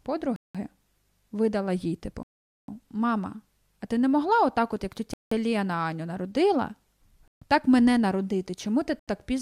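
The speech cuts to dead silence five times: 0.36–0.55 s, 2.23–2.68 s (the longest, just after "видала їй"), 5.14–5.32 s, 7.28–7.42 s and 8.99–9.08 s. Each time the speech picks up again. Classic Bluetooth stall, likely the headphone buffer running dry while delayed packets got resent.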